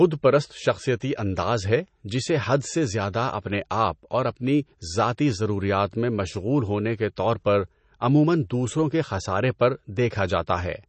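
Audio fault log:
Throughout, MP3 compression: the encoder likely ran short of bits, which fits a low bitrate around 32 kbps, so it dropped everything above 8.3 kHz and zeroed weak frequency lines that flicker on and off from frame to frame. The speech loses its top end and sounds dull, with a watery, swirling texture; s sounds turn metallic and chirpy, and consonant onsets smear instead of landing crisply.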